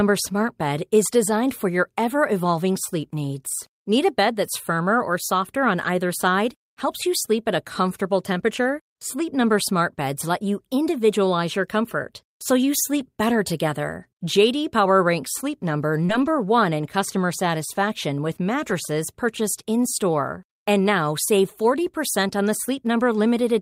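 Just after "firmer or softer on", at 5.81 s, there is a lost packet rebuilt from error correction. The next packet carried a low-bitrate backup copy, so the decoder played that instead of leaving a gap. About 40 ms comes out rougher and noisier, which fits two packets going missing. The same repair recurs at 9.41 s (40 ms), after "your comfort so you" at 12.99 s (20 ms), and at 13.99 s (40 ms). On a spectrogram each shows as a short, grainier patch with less clean harmonic detail.

At 16.05 s comes a short concealed packet loss. About 40 ms never arrived, and the receiver extended the preceding sound for roughly 35 ms before blending back. It is heard as a brief smear or wobble, and the spectrogram shows smoothed, repeated texture. From 16.09 to 16.27 s a longer error-correction rebuild follows, 100 ms of coarse, noisy audio. A final 20 ms rebuild falls after "in customer satisfaction with" at 18.69 s.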